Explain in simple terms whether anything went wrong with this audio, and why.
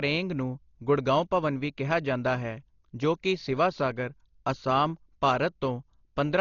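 Something did go wrong, across the whole clip: the speech sounds dull and muffled, with nothing above about 7 kHz, and a rough, fluttery hiss clings to it. That's heavy damage, likely from Dolby Digital compression squeezed too hard, filling discarded detail with noise.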